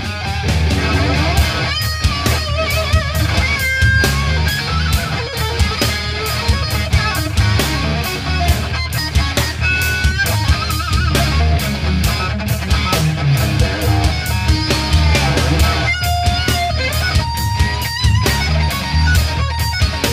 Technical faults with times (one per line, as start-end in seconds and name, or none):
none